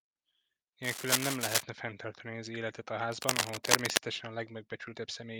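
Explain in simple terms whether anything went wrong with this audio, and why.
Twice the speech is covered by a harsh scratching, rustling sound louder than the voice, from 0.83 to 1.63 s and again from 3.12 to 3.97 s. This is cable scratch noise, likely from a worn cable or plug being moved, making its electrical contact flicker.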